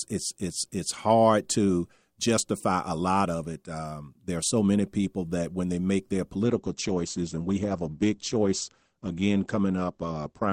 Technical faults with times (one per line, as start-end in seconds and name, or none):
6.44-10.52 adaptive stream at a lower bitrate